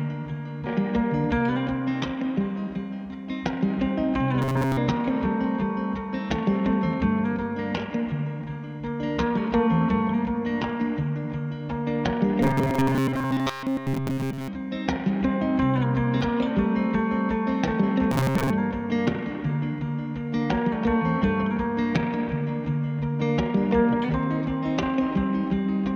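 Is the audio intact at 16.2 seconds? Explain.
No. At 16.21 s there is a brief glitch lasting only a split second, caused by damaged data in a compressed stream. A short run of the encoded data there was corrupted, so the decoder could not read those frames correctly, lost its place in the stream, and had to hunt forward for the next valid frame header. The misread or missing frames during that resynchronisation are what produce the glitch.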